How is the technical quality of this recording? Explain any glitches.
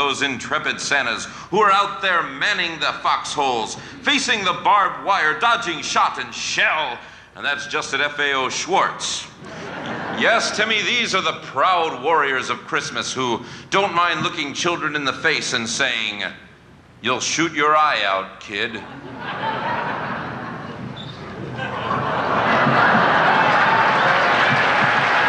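Two brief dropouts mar the audio. Block of digital silence at 4.84 s and 6.32 s: a short run of zeros replaced the audio, either because the output buffer wasn't filled in time or because a calculation produced invalid numbers. The gaps, about 4.4 ms and 1.5 ms (the second fits a 64-sample block), are too short to hear as silence and come through as ticks.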